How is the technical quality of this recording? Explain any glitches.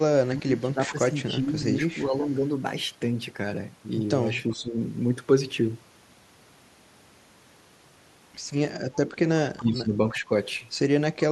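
The recording has two recurring call-processing faults: speech suppressed in double talk, and echo leak.

Speech suppressed in double talk occurs at 0.22 to 1.49 s, 2.09 to 2.22 s, 4.49 to 4.77 s, 9.56 to 9.94 s and 10.13 to 10.31 s. The voice dips in level, by about 15, 5, 10, 20 and 10 dB respectively. The first dip takes up about a second. The likely cause is both sides speaking at once. The echo canceller cannot separate the talker from loudspeaker echo, so it turns everything down.

Echo leak appears at 2.22 to 2.48 s and 4.34 to 4.53 s. A faint delayed copy of the speech is heard, lagging about 370 ms behind. It sits about 30 dB below the speech in the first case and about 25 dB below in the second. This is likely a far-end loudspeaker whose echo canceller let some of its microphone pickup pass. That residue returns as brief, quiet scraps of repeated sound.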